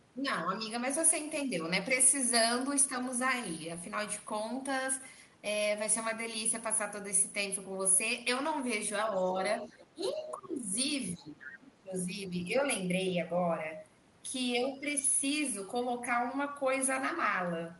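Speech suppressed in double talk starts at 9.31 to 9.39 s with a shallow dip of about 5 dB, then recurs at 9.62 to 9.76 s. The echo canceller was likely confused by both sides talking at once and could not tell the local talker from the loudspeaker echo, so it pulled the whole signal down. The heavier cuts, about 20 dB at their deepest, come at 9.94 to 10.73 s and 11.16 to 11.94 s, where the speech sinks for most of those spans. A final light dip follows at 12.12 to 12.43 s.

The other side's voice leaking through overlaps these dips at 9.60 to 9.86 s and 10.08 to 10.49 s. Residual loudspeaker echo, likely left unremoved by the canceller, sits faint in the background at about 25 dB below the talker. A brief, stronger scrap at 11.42 to 11.48 s rises to about 15 dB below the speech.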